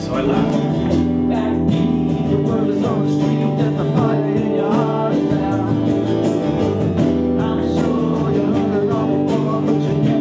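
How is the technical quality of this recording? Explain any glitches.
No glitches can be heard anywhere in the recording; it carries the usual character of a call's microphone processing, with the lowest bass trimmed by its high-pass filter and nothing above 8 kHz, and the signal stays technically intact throughout.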